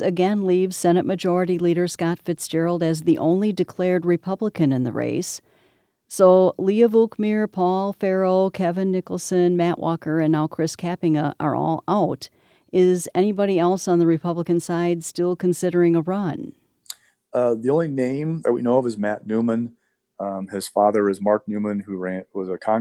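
No technical faults can be heard anywhere in the recording.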